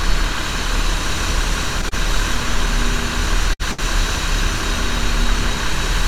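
Short stall from a late packet at 1.89 to 1.94 s: a packet arrived late, the jitter buffer ran dry, and the receiver held the last sound for 25 ms before carrying on from the same point. Nothing is lost, but that moment is briefly stretched with a faint buzz.

Burst of packet loss at 3.53 to 3.62 s: consecutive packets never arrived in time, so the receiver extended the last sound for 59 ms while fading it, then jumped ahead. About 60 ms of audio is missing, heard as a decaying buzz or hiss and then an abrupt resumption.

Another short stall from a late packet follows at 3.71 to 3.82 s, longer this time, with the sound held for 72 ms and the playback delay growing by the same amount. No audio is lost, but the hold is heard as a dragged, slightly buzzy sound.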